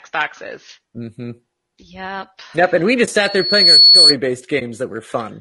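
Throughout the speech there is a rough, grainy texture, with noise filling the gaps between harmonics and a thin, synthetic-sounding top band. This is low-delay AAC compression, likely AAC-ELD at a rate around 32 kbps. Its short frames resolve pitch harmonics poorly, so the damage sits on voiced sound rather than arriving as hiss or warble.

At 3.05 s a brief dip opens where about 20 ms of audio disappears. This is AAC frame loss with muting: the decoder zeroed one lost frame, and the overlapping windows faded the sound out and back in. That soft edge distinguishes it from a hard dropout.

From 3.24 s to 4.15 s a loudspeaker feedback squeal appears, a single tone at 4.4 kHz. It swells over roughly half a second to about 10 dB above the speech. It is a feedback loop rather than interference because the one pitch grows by itself instead of starting at full level.

At 4.59 s a second AAC frame loss with muting takes out another 20 ms or so. 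It produces the same gentle fade-out and fade-in.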